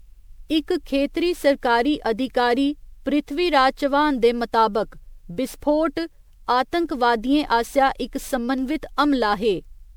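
Generation loss runs throughout the speech, likely from around ten successive MP3 encodes at a rate that sounds close to 128 kbit/s. Each pass requantises on a shifted frame grid, so noise and spectral gaps accumulate, leaving a swirly, hollow sound, blurred consonant attacks and nothing above 20.8 kHz.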